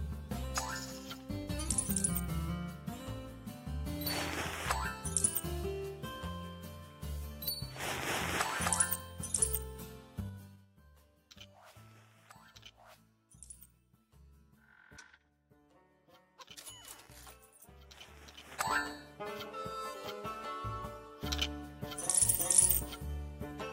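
Zipper noise occurs twice: a fall of about 20 dB from 10.16 to 10.72 s and a rise of about 20 dB from 18.36 to 18.76 s. Each change moves in unsmoothed steps of about 3 dB, roughly ten to fifteen per second, so the waveform envelope forms a staircase and every step leaves a faint vertical click line on the spectrogram.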